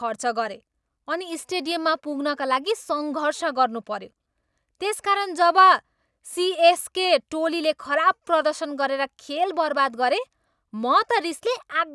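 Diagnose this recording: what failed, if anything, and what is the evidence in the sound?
Nothing in the speech signal points to a failure at any stage of the chain, with no audible defect anywhere in the recording.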